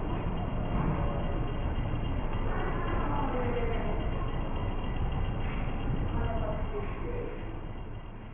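Aliasing runs through the whole clip: content above 3 kHz was never filtered out before the rate dropped, which fits a 6 kHz rate, so it folds back as gritty, metallic tones at unrelated pitches, somewhat louder than the real sound. A plain low-pass would only dull it.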